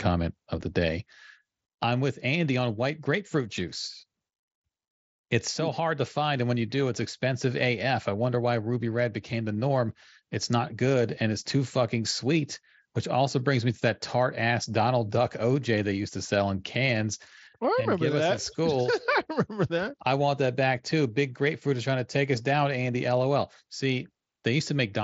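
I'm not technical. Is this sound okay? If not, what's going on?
Yes, no faults here.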